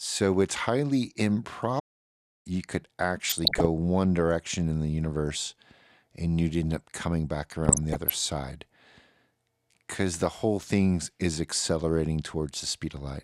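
At 1.79 s the speech cuts out mid-flow and the output goes silent until 2.47 s, a gap of about 0.65 s, before the sound resumes. This is a playback stall. The likely cause is that the player ran short of buffered data, or its audio thread was held up, so nothing reached the output until it caught up.

From 3.29 to 3.66 s, and again from 7.54 to 8.11 s, the speech is overlaid with short blips of noise. This is DAB burbling. Bit errors of the order of half a percent slip past the error correction into the MP2 stream. Corrupted samples then put short blips of noise into individual sub-bands, and corrupted scale factors make sub-bands jump in level for up to a frame. The longer second burst points to a longer run of damaged frames.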